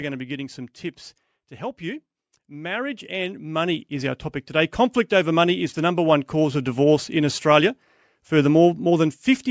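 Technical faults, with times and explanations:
1.58 to 5.83 s, automatic gain rising: the gain control judged the input too quiet and raised its gain by about 12 dB over four seconds, so from "getting some tips to" until "number one cause of" the speech and background swell together.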